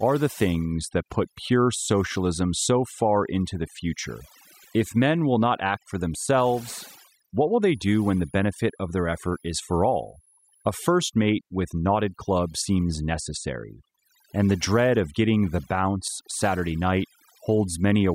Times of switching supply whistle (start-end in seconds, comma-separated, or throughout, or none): 7.62-10.71